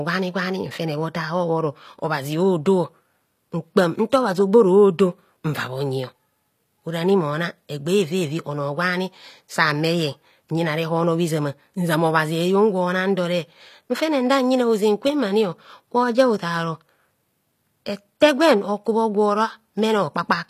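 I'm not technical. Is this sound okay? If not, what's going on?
No. All the way through, the speech has a gritty, metallic edge, and the s sounds come out gritty and lispy. The very top of the sound stops short at about 14.9 kHz. The likely cause is HE-AAC compression. To save space, it keeps only the lower part of the sound properly and rebuilds the brightness by copying that lower part upward. The result is bright but fake, which is why the hiss and sparkle sound off.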